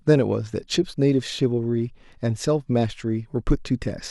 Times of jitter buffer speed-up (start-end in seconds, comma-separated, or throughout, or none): none